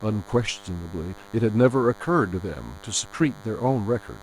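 Throughout, a DECT cordless phone buzz sits about 25 dB down: rectified 10 ms radio bursts, drawing 100 Hz-spaced harmonic lines on a spectrogram.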